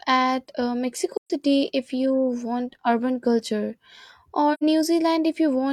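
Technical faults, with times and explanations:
1.17 to 1.31 s and 4.53 to 4.64 s, AAC frame loss with muting: blocks of the coded stream went missing and the decoder filled each gap with silence by zeroing the spectrum. The first gap is about 128 ms, which fits three lost frames, and the second about 85 ms, which fits two. Because neighbouring frames overlap, the speech fades out and back in across roughly a frame at each edge, leaving a soft-sided hole rather than a hard cut.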